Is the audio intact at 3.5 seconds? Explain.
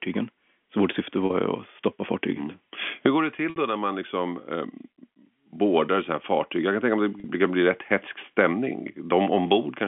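No. Packet loss with pitch repetition hits 3.50 to 3.56 s, after "går det": about 60 ms went missing, which fits three 20 ms packets, and the receiver looped the last pitch period, fading it. It sounds like a brief buzzy hold before "då när man liksom".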